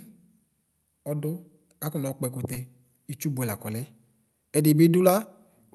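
Speech over a call path band-limited near 12 kHz, with short concealed packet loss at 2.53 to 2.57 s: about 20 ms never arrived and was filled by extending the preceding sound, giving a brief smeared wobble. Unlike a hard dropout, nothing goes silent and there is no sharp click.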